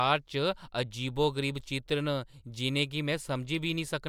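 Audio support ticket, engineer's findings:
No faults found in the speech clip. Nothing to attribute to any component.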